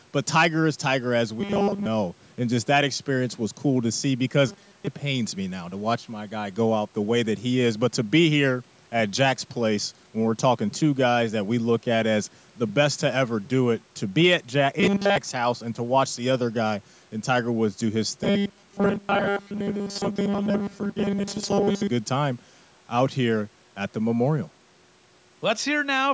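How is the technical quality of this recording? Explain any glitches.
The speech has four bursts of robotic sound from repeated short buffers: 1.41–1.87 s, 4.49–4.87 s, 14.80–15.17 s, and the longest, 18.24–21.87 s. Each is a metallic 200 Hz buzz, likely from a 5 ms stretch of audio replayed while most of the real audio, or all of it at 14.8 s, is skipped. The audio also reaches no higher than 8 kHz after the call microphone processing.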